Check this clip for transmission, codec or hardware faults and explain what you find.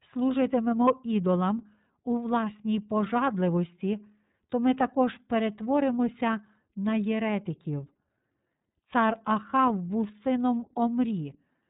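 One codec fault runs through the whole speech clip.

iLBC codec, throughout: each 30 ms frame's excitation is coded independently, which fits the 13.33 kbps mode. Nothing above 3.8 kHz survives, so the speech sounds narrowband and muffled, with a plainly audible rough, synthetic texture.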